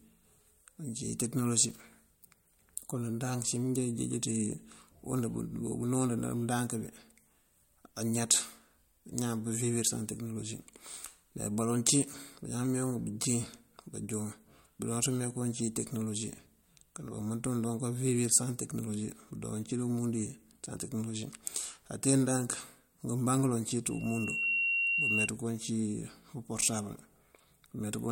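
Loudspeaker feedback squeal runs from 23.90 s to 25.29 s. The microphone is picking up the loudspeaker it feeds, and at 2.8 kHz the loop gain has risen above one, so that frequency keeps reinforcing itself on each pass. A thin tone swells over about half a second into a squeal that sits roughly 5 dB above the speech, holding at one pitch until it stops.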